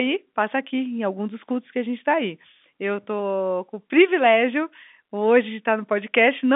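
No technical faults occur anywhere in this speech recording, so there is nothing to set out in time order.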